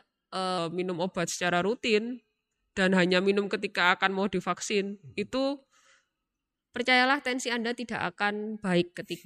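From 0.58 s to 6.56 s the speech runs slow and low, a wrong sample rate fault: audio captured at 48 kHz is being played out at 44.1 kHz with no conversion, so everything is slowed to about 0.92 times normal speed and pitch drops by roughly 1.5 semitones. Unlike a time-stretch or pitch-shift effect, tempo and pitch move together in lockstep, with formants sinking too, until normal pace returns at "percayalah tensi anda".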